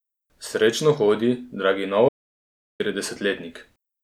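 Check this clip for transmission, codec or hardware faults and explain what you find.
One fault is present: an audio dropout to silence from 2.09 s to 2.80 s. The speech cuts off mid-flow and 0.71 s of silence follows, with no room tone, before the audio resumes. The likely cause is lost input while recording continued writing silence.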